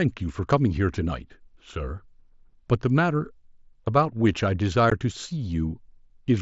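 At 4.9 s the speech has a brief hole, about 15 ms long, with abrupt edges. This is unconcealed Bluetooth headset packet loss. Short voice packets, likely two, went missing between headset and phone. Nothing filled the gap, so the speech simply drops out. The surrounding speech carries the light grain of the mSBC wideband headset codec.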